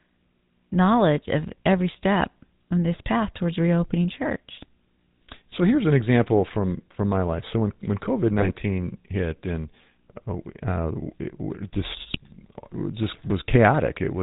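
Speech, and the whole thing carries that GSM full-rate codec character: a buzzy, gravelly roughness from the coder rebuilding the voice off a vocal-tract model driven by a thinned-out pulse excitation, plus a hard ceiling at 4 kHz so it sounds dull and boxed-in. The damage is plainly audible, which fits the original 13 kbps full-rate phone coder. On top of that there are two bursts of GSM bit errors, from 8.38 to 8.5 s and from 12.1 to 12.2 s, where the voice breaks up into squawks, pops and gargling for about a tenth of a second each. That's what happens when corrupted bits get into the decoder's filter, pitch or gain values for a handful of frames. The first burst sounds a bit nastier, which points to a slightly worse error rate there.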